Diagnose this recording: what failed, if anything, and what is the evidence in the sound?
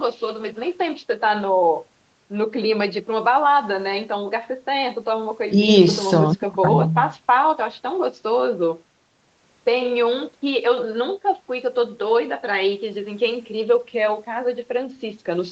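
Nothing failed: the speech shows only the expected traces of a call chain, with the lowest bass removed by the microphone processing's high-pass filter and nothing above 8 kHz, consistent with an Opus call path running at a wideband setting.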